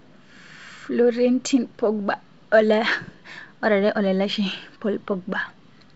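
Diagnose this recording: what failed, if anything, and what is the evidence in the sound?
Nothing has failed: the speech carries the wideband telephone bandwidth expected of G.722 coding at its full 64 kbit/s rate, and no stage in the chain shows a defect.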